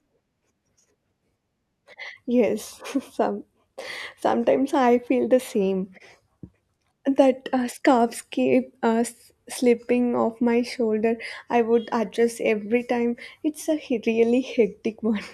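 Listening through this speech recording, nothing stood out as a technical problem at any point.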